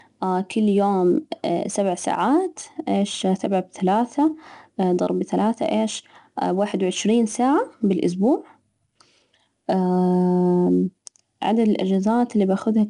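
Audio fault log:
throughout 4-bit ADPCM compression: each sample is coded as a small step from a prediction, leaving plainly audible gritty hiss that rises with the speech level and roughness on sharp onsets. Nothing is heard above 10.6 kHz, which fits an 88 kbps stream.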